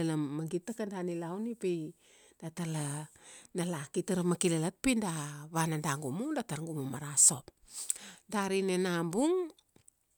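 No technical faults turn up anywhere in the recording, and the signal holds steady from its opening moment to its last.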